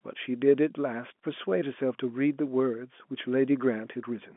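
No technical faults can be heard in this speech, which comes over a G.711 mu-law telephone channel at 64 kbps with the usual line band of roughly 200 Hz to 3.4 kHz and nothing above about 3.7 kHz.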